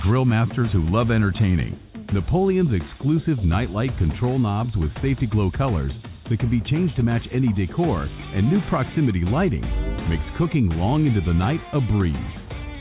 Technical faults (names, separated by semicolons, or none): none